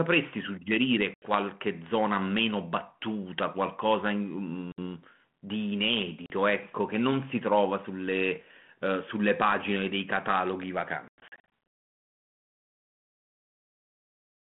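Packet loss on an ADPCM call cuts hard-edged silent holes at 1.14–1.34 s (80 ms), 4.72–4.82 s (60 ms), 6.26–6.31 s (40 ms) and 11.08–11.44 s. The last spreads about 260 ms of gaps over 440 ms, longest 100 ms. Speech then resumes slightly distorted, as the decoder's predictor and step size have lost track of the sender's.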